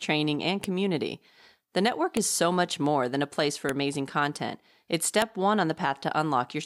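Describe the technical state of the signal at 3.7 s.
At 3.69 s there is a file header played as audio. A joined WAV piece kept its header bytes. They play as samples, giving one sharp, loud click.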